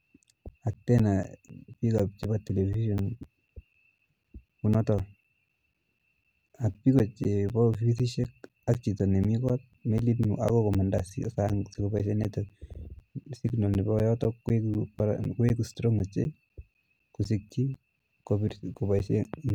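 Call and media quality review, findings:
Periodic USB or driver dropouts, 0.24 to 19.5 s: ticks every 0.25 s over the speech, with around 10 ms of silence each. A blocked bus or driver leaves flat waveform gaps and evenly spaced vertical broadband spectrogram lines.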